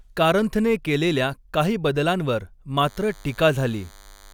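At 2.87 s a DECT cordless phone buzz comes in and carries on right to the end of the clip. Something like a DECT handset or base station sitting close by is firing short radio bursts 100 times a second, and the audio circuitry is rectifying them into sound. You get a thin, steady buzz at 100 Hz with lots of harmonics, sitting fairly low, well under the speech.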